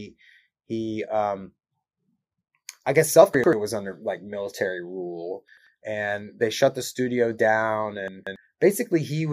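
At 3.34 s, just before "was under like military", the speech jumbles for about 0.19 s. These are chunks out of order: a chunk of about 93 ms arrives one place late and plays after the chunk that should follow it. Nothing is missing, but the swap leaves three hard joins around a scrambled fragment. The same happens at 5.48 s, between "under like military rule" and "and they shut the". At 8.08 s, after "shut the studio down", a chunk lands two places late, so the garble lasts about 0.28 s.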